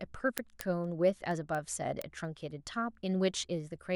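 An unlocked receiver clock, roughly 100 ppm off, slips single samples from 0.14 to 3.89 s, giving word clock ticks roughly five times a second.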